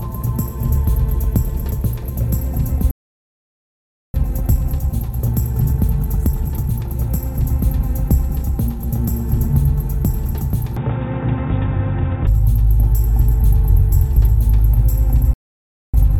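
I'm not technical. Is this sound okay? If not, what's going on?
No, there are a few problems.

The first is a playback stall, likely because the player ran short of data or got held up. The sound simply stops for about 1.2 seconds at 2.91 s. A second, shorter stall of about 0.6 seconds comes at 15.33 s.

Each stall is followed by a time-compressed catch-up, where the player trims tiny pieces to get back on schedule. From 4.14 to 7.14 s the sound runs about 1.1 times fast, rushed but at normal pitch. From 15.94 s to the end it runs 1.5 times fast, clearly hurried.

From 10.77 to 12.27 s, the input was likely switched to a poorer device, such as a weaker microphone. There is no gap at the switch, but the sound turns muffled and slightly quieter, and picks up new background noise.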